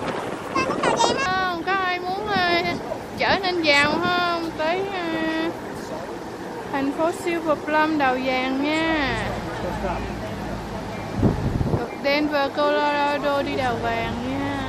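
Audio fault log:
0.00–1.26 s, wrong sample rate: the sound runs fast and high, about a fifth above its true pitch, because the samples play back unconverted at 1.5 times their recorded rate, which fits 32 kHz material played at 48 kHz, shifting pitch 7 semitones.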